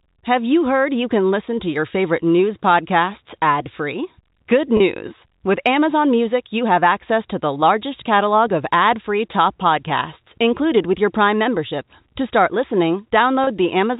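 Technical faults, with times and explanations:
4.77–4.80 s and 13.44–13.47 s, packet loss with pitch repetition: each 30 ms gap, fitting a single lost packet, is patched by repeating the last pitch cycle, so speech briefly holds a slightly buzzy tone; on a spectrogram, harmonics freeze into flat horizontal lines, and the waveform shows identical repeated periods.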